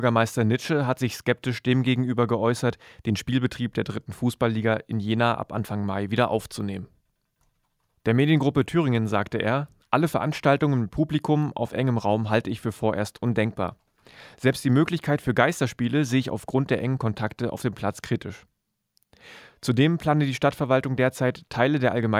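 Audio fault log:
No fault is audible anywhere in the speech, and the signal holds steady in level, timing and tone throughout.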